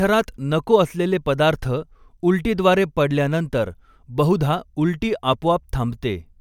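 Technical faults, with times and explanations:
No technical faults are audible anywhere in this speech recording.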